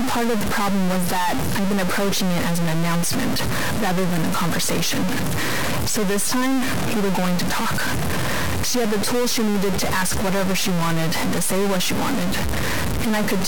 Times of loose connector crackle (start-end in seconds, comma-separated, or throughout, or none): none